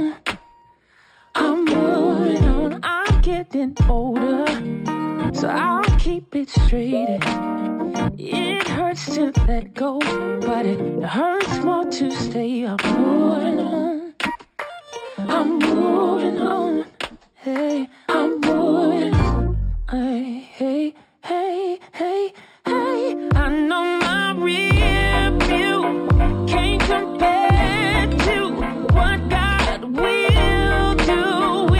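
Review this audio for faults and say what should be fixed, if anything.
There's imaging from linear upsampling running through the whole clip. It sounds like it started life at 12 kHz and was brought up to 44.1 kHz by just joining the samples with straight lines. That's a pretty leaky filter, so the top of the original band comes out dulled, and a mirrored copy of the spectrum sits between 6 kHz and 12 kHz, roughly 30 dB below the real sound. You hear it as a faint metallic shimmer on the bright, hissy parts. To prevent it, redo the conversion from the 12 kHz source with a proper band-limited resampler that has a steep low-pass filter, rather than straight-line interpolation.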